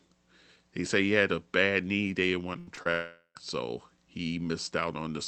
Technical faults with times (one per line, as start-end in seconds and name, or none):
2.53-2.87 repeated packet loss (robotic sound)
2.91-3.37 long network dropout